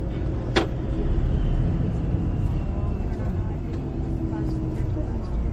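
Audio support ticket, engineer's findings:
Generation loss, throughout. Swirly, hollow texture, smeared transients, nothing above 16.5 kHz. Likely repeated MP3 re-encoding at 64 kbit/s, about seven passes, each requantising on a shifted frame grid, compounding noise and spectral holes.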